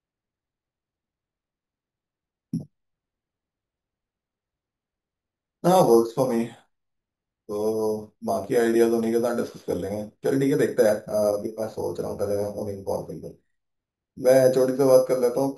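Imaging from sample-and-hold upsampling runs through the whole speech clip, and it sounds like audio at about 11 kHz raised to 44.1 kHz by simply repeating samples. Mirrored copies of the speech sit from roughly 5.5 to 11 kHz, about 22 dB down, giving a metallic fizz that tracks the speech level.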